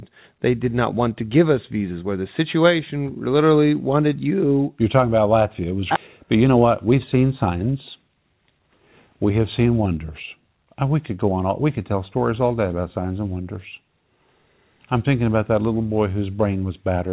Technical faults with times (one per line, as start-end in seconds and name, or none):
5.96-5.98 skip ahead
6.24-8.60 jitter buffer speed-up